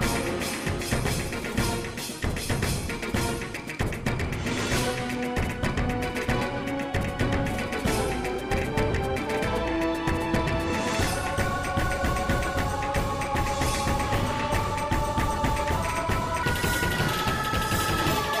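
At 16.43 s the last couple of seconds, through to the end at 18.4 s, jump into a section at the wrong speed, running about 1.47 times too fast. Because speed and pitch move together, the sound suddenly turns hurried and lifts by roughly seven semitones, a bit over half an octave, so the tail end comes out bright and chipmunky. It's likely an editor or player clocking that stretch at the wrong rate.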